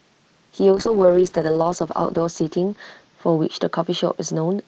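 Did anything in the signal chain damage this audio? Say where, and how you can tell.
Yes. A call bitrate drop begins at 0.75 s and lasts to the end. The network's bandwidth estimate fell, so the Opus encoder went from 32 to 8 kbps, bottoming out for 1.33 s. The speech turns coarse and watery and loses its upper frequencies.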